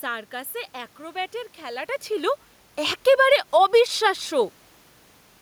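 From 2.97 to 3.78 s, automatic gain falling: the gain control, judging the input too loud or its background noise too strong, eases down about 3 dB. Speech and room noise shrink together, the waveform tapers and the spectrogram dims evenly.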